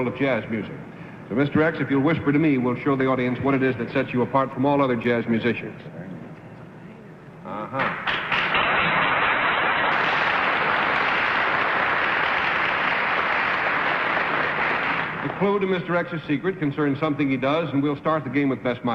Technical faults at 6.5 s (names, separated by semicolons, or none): none